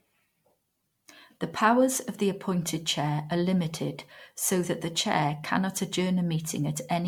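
Throughout the speech, a swirly, hollow smear blurs attacks beyond what one encode would cause, likely generation loss from about five MP3 passes at 96 kbit/s.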